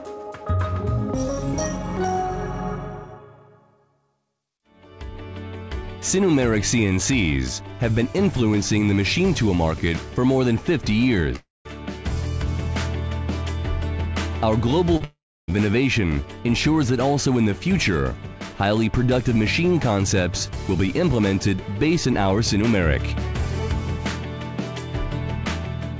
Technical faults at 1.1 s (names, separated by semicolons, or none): none